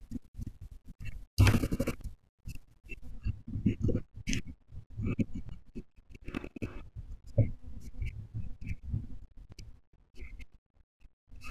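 From 3.11 s to the end, de-emphasis is applied wrongly. The treble slopes away, about 11 dB down at 10 kHz, leaving the speech dull and muffled.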